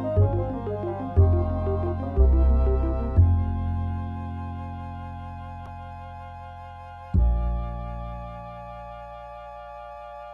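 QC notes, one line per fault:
5.63–5.67 s, damaged data in a compressed stream: a short blip where the decoder hit bad bytes and lost sync.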